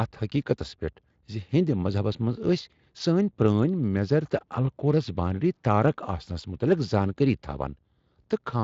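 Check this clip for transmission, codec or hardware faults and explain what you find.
Nothing here points to a transmission, codec or hardware problem; the speech comes through a Speex link with its top end stopping at about 7.6 kHz, which is just how that path carries it.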